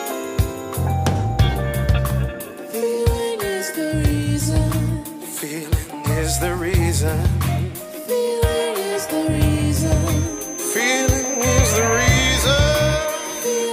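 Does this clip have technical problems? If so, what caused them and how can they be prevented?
Yes. From 9.68 s to the end, a thin feedback whistle near 6.2 kHz sits roughly 10 dB below the sound and swells and fades slowly in level. The likely cause is a loudspeaker-to-microphone loop hovering at the edge of oscillation, so one frequency rings on without climbing. Unlike a runaway howl, it never builds up, and unlike a constant electrical tone, it wavers. Lowering monitor gain, moving the microphone away from the loudspeaker, or notching 6.2 kHz prevents it.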